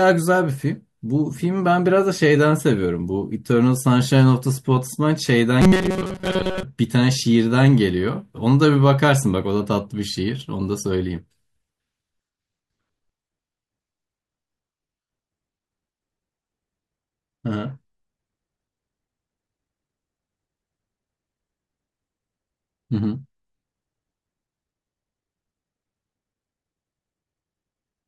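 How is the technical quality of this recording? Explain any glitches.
One glitch affects the recording, at 5.62 to 6.63 s. The likely cause is new audio arriving too slowly, so the playback side keeps looping its last short buffer, about 5.3 ms long, while the genuine audio in between is dropped. That happens for roughly two thirds of the stretch. The steady loop imposes its own pitch near 188 Hz, producing robotic sound from repeated short buffers: the speech becomes a rigid, metallic buzz that only loosely tracks the words.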